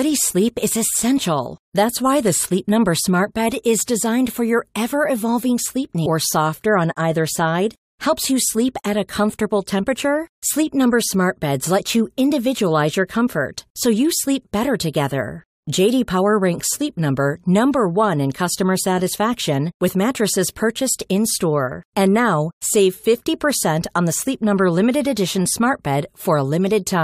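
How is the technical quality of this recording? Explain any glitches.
There is one glitch in this speech recording. Stream segment skipped, at 6.05 s: the speech jumps abruptly forward with a small blip. The likely cause is that one segment of the streamed audio failed to load and playback resumed with the next, dropping a stretch of the programme.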